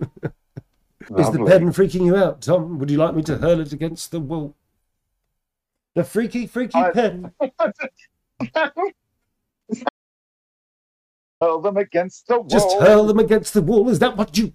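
The audio suffers an audio dropout to silence from 9.89 s to 11.41 s. For about 1.52 s the sound stops dead, mid-flow, with no room tone left. The likely cause is a lost input link while recording continued as silence. Whatever sounded then is gone.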